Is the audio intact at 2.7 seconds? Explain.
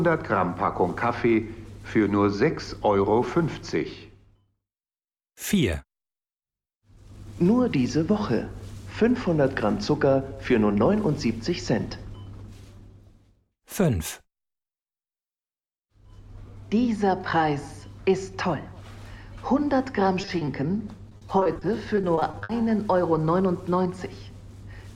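No. Dropped samples at 2.66 s: a couple of samples are likely missing from the stream there, so the waveform skips straight from one value to a later one with no transition between them. The gap lasts only a tiny fraction of a millisecond, far too short to remove anything audible. What it does leave is a single sharp click, which appears as a thin vertical line across the whole spectrum at that instant.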